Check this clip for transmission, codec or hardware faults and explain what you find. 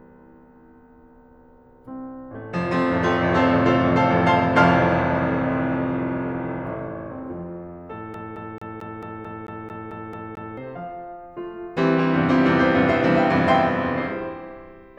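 One fault is present, a CD stuck on one turn. From 8.14 to 10.57 s the music stutters, repeating the same 0.22 s fragment eleven times with brief mutes, as a scratch throws the laser back one track each revolution.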